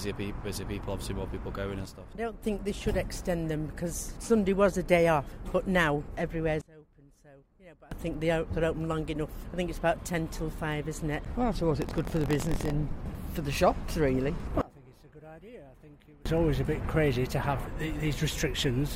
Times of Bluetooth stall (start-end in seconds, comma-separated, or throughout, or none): none